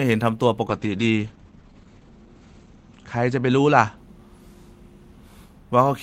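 From 0.72 to 4.63 s, a call bitrate drop from 32 to 10 kbps muffles and roughens the speech. The spectrogram shows the top band collapsing from 20 kHz to 8 kHz.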